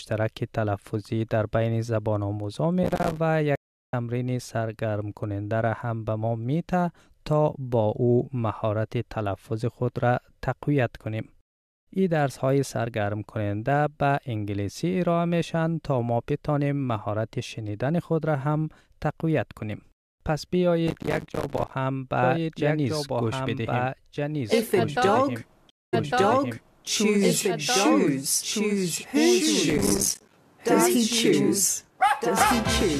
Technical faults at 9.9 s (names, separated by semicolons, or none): none